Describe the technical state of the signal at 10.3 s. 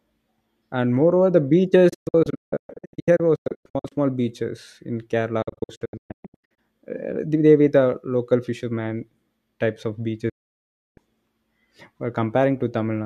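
At 10.3 s the speech is cut by a digital broadcast dropout lasting from 10.29 to 10.98 s. The receiver stopped getting valid frames and muted. The sound fades out within about 8 ms and leaves roughly 0.67 s of silence. That lost stretch of the programme never returns.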